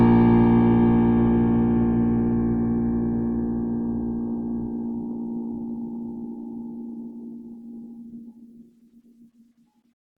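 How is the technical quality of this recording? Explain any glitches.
The recording carries plainly audible Opus compression damage for its full length. Throughout the music, tones sound grainy, rough and noisy. The likely cause is Opus music-mode coding at a bitrate around 16 kbps, which preserves each band's energy but fills starved bands with folded or noise content.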